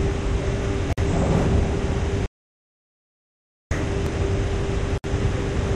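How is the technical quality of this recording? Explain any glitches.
The recording has three kinds of technical fault: two short gaps at joins between encoded pieces, one long dropout to silence, and a double pop.

Gap at a join of encoded pieces, 0.93 to 0.98 s and 4.98 to 5.04 s: The audio was encoded in separate pieces about 4.0 s apart and joined without trimming. Each encoder run's start-up delay and final-frame padding stayed in the file as blank time. In continuous sound this opens a silence of 50 ms and then 64 ms, with smeared edges, before the sound resumes where it left off.

Audio dropout to silence, 2.26 to 3.71 s: The input signal was lost, likely through a disconnected device, a failed link or a mute, while recording carried on writing silence. The sound cuts out mid-flow for about 1.45 s. The gap is silent with no room tone, and whatever happened in that stretch is gone. 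The sound then returns abruptly.

Loud pop, 4.06 to 4.18 s: A sudden voltage step or pulse, likely from a plug, switch, static discharge or driver glitch, was added to the signal and shaped by the circuitry after it. It is heard as two sharp pops in quick succession, peaking about 10 dB above the surrounding sound, which continues underneath them.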